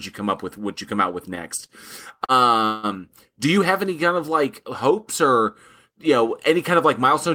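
At 1.66 s and 2.25 s, a short stall from a late packet holds the speech for 26 ms and 40 ms with a faint buzz or dip. Nothing is lost. At 2.65 to 2.86 s, a call audio freeze stretches the sound for about 185 ms into a fading buzz or hiss, never reaching silence. The freeze is likely caused by packets held up in transit, and the speech then resumes intact but later.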